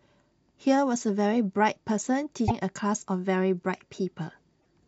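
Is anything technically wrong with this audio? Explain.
Yes. A broken MP3 bit reservoir is the likely cause of brief glitches at 2.47–2.51 s and 4.59–4.65 s. Missing frames leave the next frame reading borrowed data from the wrong place, so the speech skips ahead with a chirp, a burst of noise or a short hole.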